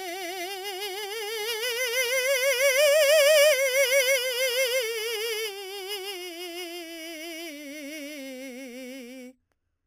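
It's a music clip with imaging from sample-and-hold upsampling running the whole way through. A bright metallic fizz sits between 4 and 8 kHz at about 10 dB below the music, tracking its level. That points to 8 kHz material raised to 44.1 kHz by simply repeating samples, with no smoothing filter.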